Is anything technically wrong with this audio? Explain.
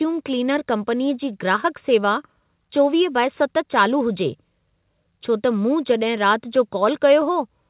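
No, nothing in this speech clip is technically wrong. It has come through a call path whose sound is limited to below 4 kHz, which fits G.711 A-law at 64 kbps, and that narrow telephone bandwidth is simply how that codec carries speech.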